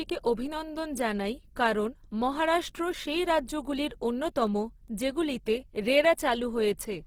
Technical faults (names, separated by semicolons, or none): Opus compression